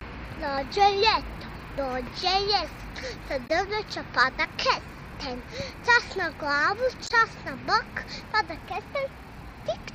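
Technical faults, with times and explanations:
3.46–3.50 s and 7.06–7.11 s, damaged data in a compressed stream: two brief bursts of about 40 to 50 ms each, heard as a chirp, squawk, click or short hole. At each point some bytes in the encoded stream are corrupted, so the decoder cannot read those frames correctly. It outputs garbled audio or drops it, loses frame sync, and resumes only when it finds the next valid frame header.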